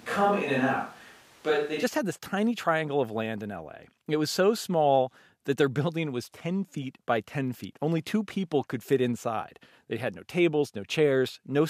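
Speech recording that opens on a distant microphone: from the start to 1.82 s the sound is roomy and hollow with thinned bass and room noise roughly 30 dB below the speech, before snapping close and dry just ahead of "had this tiny triangle". Level barely shifts, so the likely cause is a failed close mic.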